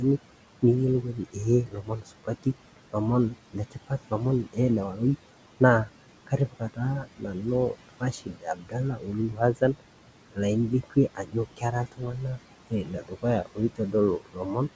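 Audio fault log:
throughout: noise suppressor artifacts. The suppressor pulls down frame by frame whatever bands it judges to be steady noise. The room noise, about 16 dB below the speech, dips between phrases and swells under them.
0.00–0.63 s, 1.02–2.96 s, 3.31–4.13 s, 4.44–4.58 s, 4.91–10.39 s, 10.7–14.76 s: speech cut by the noise suppressor. The suppressor mistakes parts of the speech for noise and turns them down by up to about 19 dB, totalling roughly two seconds across 4.91–10.39 s. The affected speech sounds swallowed or faint.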